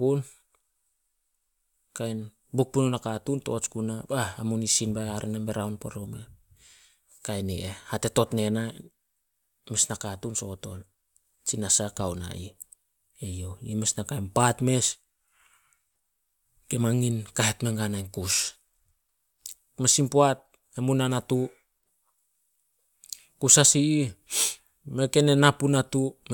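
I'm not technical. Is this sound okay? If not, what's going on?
Yes, this speech recording sounds fine, with no technical faults to point out. Nothing breaks up, drops out or sounds damaged at any point.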